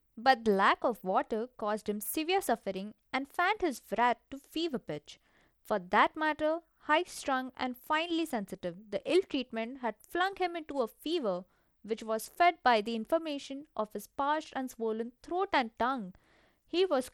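Speech runs through audible codec damage from start to finish. The treble thins out and flickers, with a gritty noise and aliasing riding on it. This is likely Bluetooth SBC compression starved of bits, which fits a bitrate near 96 kbps.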